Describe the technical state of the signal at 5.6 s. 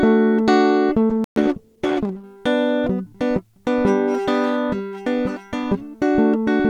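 The music at 5.6 s is intact, with no audible fault at that moment.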